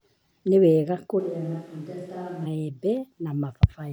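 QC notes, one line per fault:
1.21–2.44 s, switch to a distant microphone: the close mic likely dropped out, so speech abruptly turns roomy and thin, about 5 dB quieter, with more room noise.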